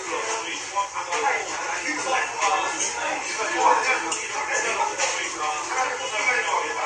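Throughout, the sound stops dead above 11.5 kHz with smeared codec artefacts, the likely mark of low-bitrate audio saved at a high bitrate: generous re-encoding cannot restore detail an earlier lossy pass discarded.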